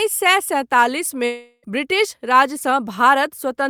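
At 1.25 s the speech stops mid-flow, and a buzzy continuation of the last sound takes its place. This smeared tail runs for about 0.37 s, fading as it goes. A brief silence of about 10 ms follows. The speech returns at 1.65 s, but about 0.38 s of it never arrives and is simply gone. This is likely a long network dropout. The receiver kept repeating the last sound to cover the gap, then fell quiet until new audio arrived.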